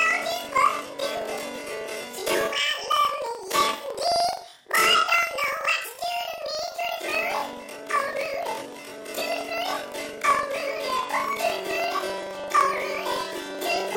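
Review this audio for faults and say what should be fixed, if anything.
Planar audio is being read as interleaved throughout the clip. Each block of about 43 ms, which fits a 2048-sample block, holds all its left samples and then all its right samples, but the reader treats the data as alternating left-right pairs. Each block's left half, then its right half, plays twice as fast, while the overall pace holds. The sound sits an octave high with a flutter; the block rate is about 23.4 Hz. To prevent it, match the reader's expected sample layout to the format the decoder actually delivers.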